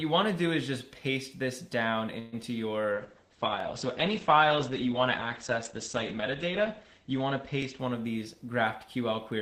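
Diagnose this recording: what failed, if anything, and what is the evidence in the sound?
From 2.19 to 2.34 s the sound does not stop dead. The last moment is stretched into about 0.13 s of fading continuation with no true silence, and then the audio resumes where it left off with nothing skipped. That points to a call audio freeze at the network and jitter-buffer stage: packets were likely held up in transit, so the receiver padded the wait and inserted delay. A dropout would remove material instead.

Right after that, at 2.42 to 2.45 s, there is a brief smear. About 20 ms of audio never arrived in time, and the decoder covered it with only a few milliseconds of extrapolation before blending back in. This is short concealed packet loss, a network fault masked by the decoder. It differs from the freeze because content is actually lost rather than delayed, and the disturbance lasts a few hundredths of a second, not a tenth or more.

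From 2.94 to 8.07 s the sound turns coarse and watery and loses its top end. The bandwidth falls from about 20 kHz to 8 kHz, and the rate bottoms out for roughly 3.8 s. This is a call bitrate drop at the codec stage: the sender's bandwidth estimate fell, and Opus was pushed from 32 to 10 kbps. A loss event would affect isolated spots, whereas here the whole span degrades and then recovers.

Two short stutters occur at 3.60 to 3.62 s and 7.62 to 7.65 s, exactly 4.0 s apart. At each one, about 21 ms replays. These are overlapping chunks in the processing pipeline: each 4-second block begins slightly before the previous one ended, so every join repeats a sliver. The strict regular spacing separates this from network concealment, which occurs wherever packets happen to go missing.

From 8.09 to 8.53 s the audio hurries at about 109% speed while the pitch stays unchanged. Roughly 50 ms in total is trimmed as the receiver sheds the delay it had built up. 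This is jitter buffer speed-up at the receiver, done by removing pitch-period-sized pieces. Because the pitch holds, it cannot be a resampling or clock error, which would shift pitch together with tempo.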